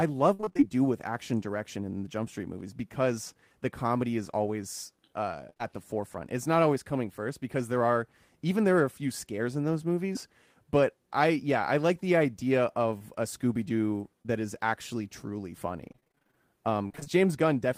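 Right at the start, from 0.33 to 0.63 s, there's repeated packet loss that gives a robotic sound. A quick run of holes, the longest about 53 ms, each got patched by stretching the last bit of sound, so roughly half that stretch is synthetic. It comes out choppy, with pieces missing. The same thing hits briefly at 5.50 to 5.61 s, again about half concealed, so you get a short choppy stutter.

Then come single dropouts, each short concealed packet loss. About 20 ms went missing each time, which fits a 20 ms packet size, and the receiver filled the hole by continuing the previous sound before blending back in. The first is at 10.13 to 10.17 s. The next is at 12.98 to 13.02 s, right after "I like the idea". Two more sit back to back from 14.22 to 14.30 s, just before "is actually truly". Each one is a tiny smear or wobble, and a short consonant can drop out.

Near the end, from 15.88 to 17.08 s, the robotic packet loss returns over a longer stretch. 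The gaps are shorter here, none over about 24 ms, and around a quarter of the span is filled in. It's a sustained choppy texture rather than one big break.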